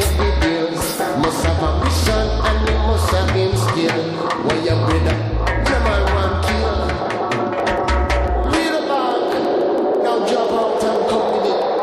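From 7.6 s to the end at 11.8 s, a train of clicks runs over the audio. The pulses come at a steady pace of about 6 per second, around thirty in all. Each one has much the same sharp shape. They peak at roughly the level of the sound itself. They tick on in the gaps as well. The likely cause is interference from nearby equipment or a faulty connection or power supply.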